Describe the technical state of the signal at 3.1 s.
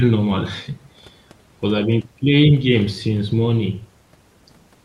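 At 3.1 s the speech comes through intact, with no dropout, click or distortion at that moment.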